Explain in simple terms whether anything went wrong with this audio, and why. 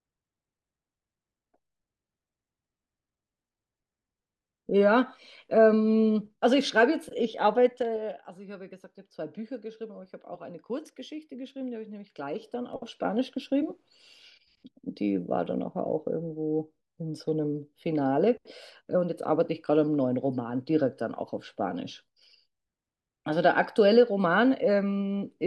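Zipper noise, from 7.60 to 8.28 s as the speech drops and from 11.95 to 13.40 s as it rises again: the volume moves in coarse jumps rather than a smooth slide, and each jump leaves a tiny click, heard as a fast, then slower, ticking.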